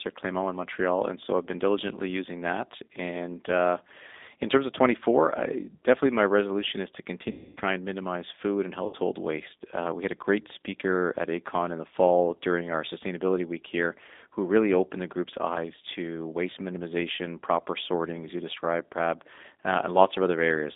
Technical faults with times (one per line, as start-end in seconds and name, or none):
0.00-20.75 G.729 codec
7.31-7.61 VoIP packet loss concealed by the speech codec
8.87-8.96 VoIP packet loss concealed by the speech codec